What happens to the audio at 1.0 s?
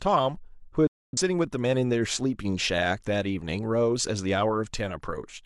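A digital broadcast dropout runs from 0.87 to 1.19 s. The receiver lost valid frames and muted, so the speech snaps to silence within about 3 ms.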